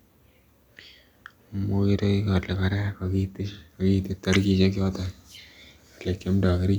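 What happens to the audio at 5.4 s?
Nothing goes wrong at 5.4 s: the speech there plays through intact, with no dropout, click, distortion or other fault audible at that moment.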